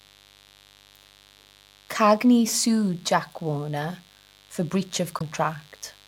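A mains buzz runs through the whole recording, sitting roughly 30 dB below the speech. Switching spikes twice per 50 Hz cycle leak in, giving a raspy drone; a spectrogram shows a comb of 50 Hz harmonics stacked into the kilohertz range, with regular spikes on the waveform.

At 5.16 to 5.22 s, just after "for breach", damaged data in a compressed stream makes the decoder misread frames and hunt for the next header. The result is a brief glitch, visible as a smeared broadband patch with an abrupt waveform jump.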